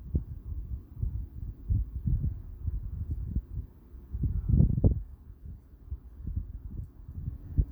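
A sound recording with no technical faults audible anywhere in it. Nothing in the signal points to a problem in how it was captured, processed or delivered.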